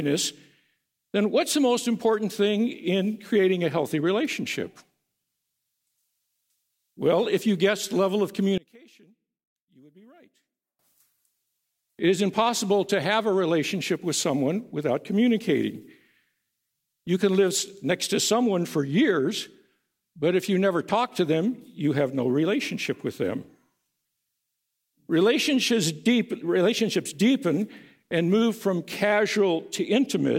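From 8.58 to 10.79 s the sound falls by about 30 dB, leaving only a faint trace. Likely cause: one channel inverted, cancelling shared content when summed.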